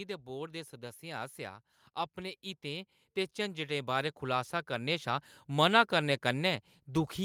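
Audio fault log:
0.25–1.41 s and 2.14–5.36 s: automatic gain rising. The gain control treats the input as too quiet and ramps up, by about 4 dB, then by about 10 dB over three seconds, so speech and background noise swell together.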